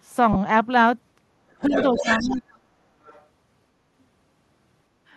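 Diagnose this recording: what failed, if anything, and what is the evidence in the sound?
At 0.33 s the speech briefly turns into a noisy, buzzy smear for about 30 ms, which fits three consecutive 10 ms frames going missing. This is a codec-stage failure: lost LE Audio frames, concealed by the LC3 decoder replaying the previous spectrum with randomised signs.

The speech dips by about 10 dB between 1.61 and 1.74 s, then drops far harder, by about 40 dB, and breaks up in pieces from 1.92 to 2.73 s. This sits in call processing and is likely speech suppressed in double talk: the echo canceller turned everything down while both sides were talking.

A second voice sits underneath from 1.64 to 2.35 s, only about 5 dB below the main speech, and a faint scrap returns at 3.04 to 3.24 s, about 30 dB down. Also call processing: likely the other side's voice leaking through as residual echo the canceller left in the microphone signal.

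From 4.02 s to the end the sound abruptly turns roomy and hollow, with thinner bass, a level about 5 dB lower and room noise about 40 dB below the speech. At the capture stage this points to a likely switch to a distant microphone after the close one dropped out.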